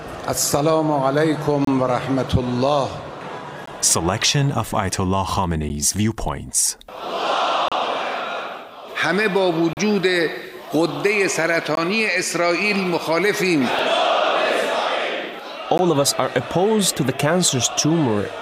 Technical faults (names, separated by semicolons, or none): gap between stream segments